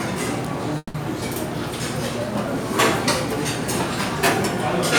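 At 0.77 s the sound stalls in a call audio freeze lasting until 0.96 s. The last bit of audio is stretched into a fading buzz or hiss for about 170 ms, then roughly 30 ms of silence, before the sounds resume exactly where they left off, now running about 170 ms late with nothing lost. The likely cause is delayed packets draining the jitter buffer. On a spectrogram the band turns smeared and uniform, then blank; the waveform tapers before recovering.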